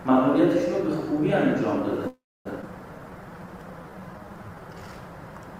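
At 2.07 s the sound stops moving forward and the last fragment carries on as a decaying buzz, falling to silence for roughly the final 270 ms of a 0.4 s hold until 2.47 s. This call audio freeze was likely caused by delayed packets draining the jitter buffer. Playback resumes where it stopped, so nothing is lost but the timeline shifts later by 380 ms.

From 2.61 to 2.65 s there is a skip ahead. A stretch of around a fifth of a second was discarded, either in transit or by an overflowing jitter buffer, and the two sides are spliced with only an 11 ms join, so the audio jumps abruptly.

Between 2.99 and 4.79 s a jitter buffer slow-down plays the audio at 87% speed with unchanged pitch. The receiver repeats short pitch periods and pause fragments to rebuild its reserve, adding 243 ms, so sounds are drawn out and may warble slightly.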